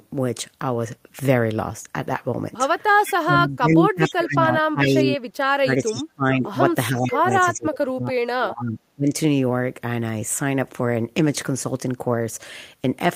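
Echo leak appears at 3.04, 4.05, 4.83, 5.78 and 7.04 s as short scraps of a copy of the speech arriving 446 ms late, about 10 to 25 dB below the direct speech. This is likely a far-end loudspeaker echo that the echo canceller did not fully remove. It adds a second, delayed layer rather than taking anything away.

Speech suppressed in double talk overlaps these scraps from 3.13 to 5.19 s, 5.46 to 6.56 s and 6.9 to 9.09 s. The main speech dips by up to roughly 30 to 40 dB. The likely cause is the canceller turning the talker down along with the echo. Unlike the echo, this is a loss of the speech itself.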